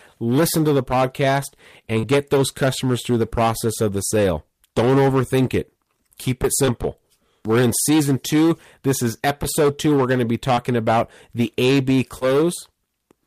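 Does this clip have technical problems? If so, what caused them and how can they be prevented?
Yes. Hard clipping runs through the whole clip. The speech reaches the converter or gain stage about 12 dB hotter than it can pass. Every peak is sheared flat, and roughly a tenth of the samples are cut off. Those flat tops add harmonics high in the spectrum, so loud syllables carry a harsh, buzzy edge. Prevention: set the input gain so peaks sit well below full scale before any stage that can overload.

Short concealed packet loss occurs three times. At 1.99–2.05 s, after "listen to the podcast" and before "get those customers through", about 40 ms of audio never arrived, and about 35 ms was filled in. At 6.65–6.69 s, after "overthink it keep it", about 20 ms was lost and 22 ms was filled. At 12.19–12.23 s, about 20 ms was lost and 21 ms was filled. Each time the decoder continued the previous sound to cover the hole, then blended back in. 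The result is a brief smear. Prevention: use a stable network path with a sufficient jitter buffer, or add forward error correction.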